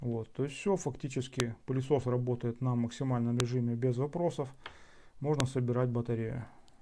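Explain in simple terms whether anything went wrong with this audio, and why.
Three sharp snaps cut through the sound at 1.40, 3.40 and 5.40 seconds, exactly 2 seconds apart. That's a file header played as audio. The recording was stitched together from 2-second pieces, and each piece still had its little block of file information at the front. The player treated those bytes as sound, so you get a loud click at every join, no matter what the audio itself is doing.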